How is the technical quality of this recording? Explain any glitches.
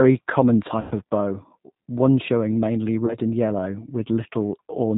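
The recording is band-limited and coded throughout, with two short dropouts repaired by the decoder.

All the way through, the speech carries the G.729 codec's signature. Nothing reaches above 4 kHz, and the voice sounds slightly rough and synthetic because the 8 kbit/s decoder rebuilds each 10 ms frame from a vocal-tract filter, a pitch predictor and a few pulses. Unlike plain telephone-band filtering, this adds a buzzy, artificial grain that a simple low-pass filter would not.

The glitches come from VoIP packet loss concealed by the speech codec. The first runs from 0.81 to 0.94 s and the second from 3.06 to 3.17 s, between "one showing mainly" and "and yellow". In each gap the decoder repeats its last pitch and filter while lowering the gain, so the sound smears into a fading buzzy tone or coloured noise rather than falling silent. The first gap lasts about 100 ms, roughly ten frames, and the second about 20 ms. 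Because each frame builds on the one before, the voice stays weak for a moment after packets resume. That lingering weakness, and the absence of an abrupt cut or click, separate this from a hard dropout.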